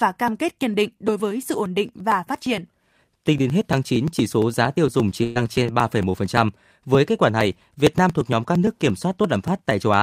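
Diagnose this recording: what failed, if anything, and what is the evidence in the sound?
Regular ticks run through the speech from 0.17 s to the end, one every 0.115 s, heard only where there is signal. These are periodic USB or driver dropouts: at the driver or buffer stage, a recurring stall drops a sliver of audio each cycle, skipped rather than silenced.

At 5.23 to 5.37 s the speech freezes into a held, fading sound and then jumps ahead, with about 120 ms missing. This is a burst of packet loss on the network path. The receiver extended the last sound across the gap while turning it down, then resumed later in the stream.

A brief smear or wobble follows at 5.63 to 5.67 s. This is short concealed packet loss: about 20 ms arrived too late to decode, and the receiver synthesised roughly 17 ms from the preceding sound before blending back into the real audio.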